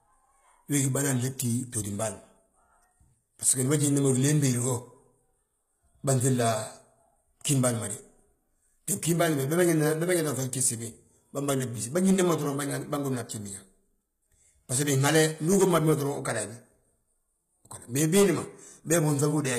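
A speech clip, likely passed through HE-AAC compression at a rate that fits roughly 20 kbps, with spectral band replication rebuilding the treble from copied lower bands. Throughout, s sounds turn gritty and metallic, and nothing remains above 14.9 kHz.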